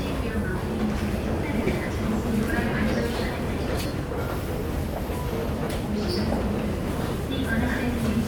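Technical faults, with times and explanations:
1.64 to 5.67 s, lost LE Audio frames: gaps at 1.64–1.67 s (30 ms), 3.87–3.91 s (40 ms) and 5.59–5.67 s (40 ms scattered over 80 ms). The LC3 decoder refills each gap with the last spectrum under random signs, so tones briefly smear into noise.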